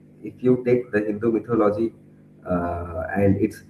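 At 1.51 to 1.53 s, just after "the hindu", comes a lost packet rebuilt from error correction. A backup copy filled 20 ms, likely one packet. It sounds briefly rougher and noisier.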